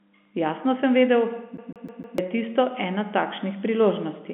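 After "sem vedel", from 1.57 to 2.18 s, a 0.15 s fragment stutters four times: a CD stuck on one turn, its laser jumping back each revolution.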